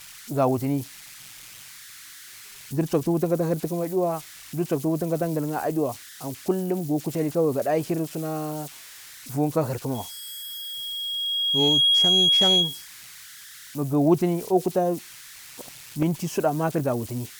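A speech recording carries two separate tonal faults. Throughout, converter idle tones sit roughly 20 dB below the speech as a faint whistle near 1.5 kHz, clearest in the pauses, with a grainy texture under quieter syllables. An undithered delta-sigma converter given very small input settles into repeating bit patterns, and these produce the tone. Unlike an interfering carrier or hum, its pitch follows the signal's DC offset rather than staying fixed. From 9.94 s to 12.88 s a loudspeaker feedback squeal appears at 3.3 kHz. Over roughly two seconds it swells until it stands about 5 dB above the speech, then stops at 12.88 s. The microphone is hearing the loudspeaker it feeds, and at that one frequency the loop gain exceeds unity. The self-sustaining growth separates it from the idle tones, which are steady, low and spread across the whole clip.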